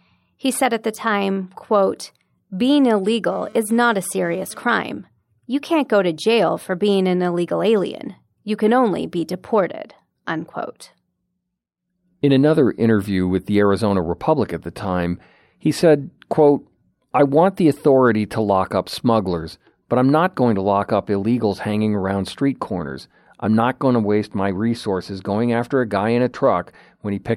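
Just after "the time quote being", from 3.31 to 4.63 s, a hard, raspy buzz cuts in beneath the speech, sitting about 26 dB below it and rich in harmonics stacked on 217 Hz. This is GSM phone buzz. A nearby 2G handset was sending data in short radio bursts at that rate, and the audio circuitry rectified each pulse into sound. Because it was a data transfer, the buzz lasts only about 1.3 s instead of persisting.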